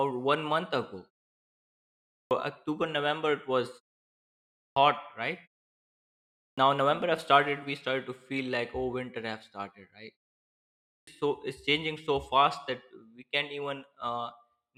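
After each pause the output wakes too late, so the first part of the next phrase is swallowed: a clipped start after a pause at 1.73–2.31 s (before "october november it was"), 4.19–4.76 s, 6.01–6.58 s (before "now november have started") and 10.43–11.07 s (after "started right", before "so is changing so"). Each loses about 0.57–0.64 s. On a waveform, flat silence gives way to full-level signal with no onset, and the spectrogram shows energy starting as a hard vertical edge.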